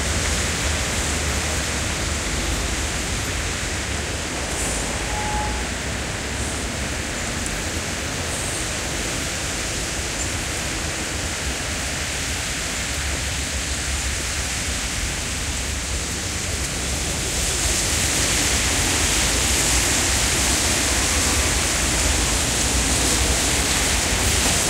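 From 19.63 s to 24.64 s, periodic USB or driver dropouts appear. A regular tick cuts through the sound once every second, about seven times in all. Each tick is a tiny gap, roughly 2 ms long, where the audio drops to silence. Something is stalling the USB link or the audio driver on a fixed schedule. The samples due in that moment never arrive, so the waveform breaks briefly and clicks.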